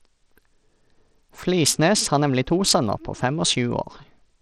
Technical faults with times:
0.00-4.42 Bluetooth SBC compression

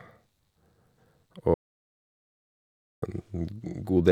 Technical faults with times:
1.54-3.02 audio dropout to silence

